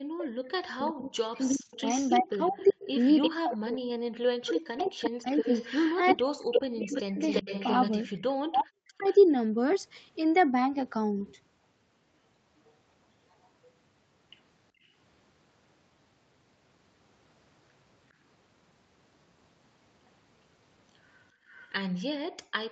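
From 0.09 to 9.07 s the talker's speech repeatedly sinks, thins out and breaks into pieces, dropping by something like 40 dB at its deepest, for roughly five seconds in total. This is speech suppressed in double talk: with both sides talking at once, the echo canceller likely could not separate the near voice from the loudspeaker echo, so it turned everything down and took the wanted speech with it.

Overlapping that stretch, from 0.86 to 9.15 s, a second, fainter copy of the voice trails the original by 342 ms, only around 10 dB below it. This is an echo leak. The far end is likely playing the call over a loudspeaker, and its canceller let part of what the microphone picked up pass back down the line.

Inside the same passage, three short patches turn rough and grainy without any gap: 1.53 to 1.71 s (100 ms, which fits five lost 20 ms packets), 3.73 to 3.75 s (20 ms, a single packet), and 4.71 to 4.81 s (60 ms, pointing to three packets). 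Each is a lost packet rebuilt from error correction. The decoder played the low-bitrate Opus copy carried in the following packet, so the audio stays continuous but sounds coarser and noisier for that moment.

The echo leak returns from 12.67 to 13.47 s, now 409 ms behind and very faint, at roughly 40 dB down, so it is more a ghost than a distinct repeat.

At 14.72 to 14.91 s the room background ducks by about 16 dB for around 200 ms and then comes back. This is background gated by the echo canceller: while the loudspeaker was playing, the canceller clamped the microphone hard and then released it.

A deeper dip of about 29 dB falls between 21.33 and 22.53 s, adding up to about 300 ms of lost ambience. From 21.52 s to the end, the echo leak is heard again, trailing by 409 ms at roughly 30 dB below the speech.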